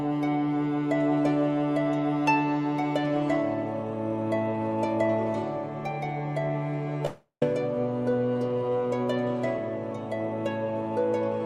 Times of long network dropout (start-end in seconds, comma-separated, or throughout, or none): 7.05-7.42